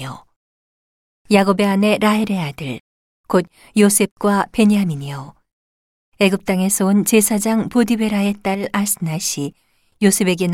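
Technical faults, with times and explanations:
8.55–8.64 s, sudden gain jump: speech and background noise drop together by about 5 dB, likely from a gain change applied instantly without any ramp.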